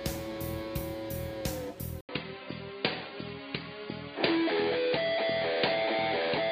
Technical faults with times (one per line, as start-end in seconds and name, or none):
2.01-6.52 input switched to a poorer device